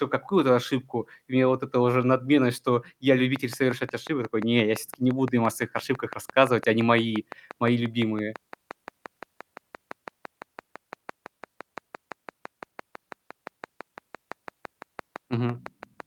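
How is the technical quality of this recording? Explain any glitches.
There's one real problem: a train of clicks from 3.36 s to the end, about 5.9 regular ticks a second, likely interference or a faulty connection, poking a few dB above the speech.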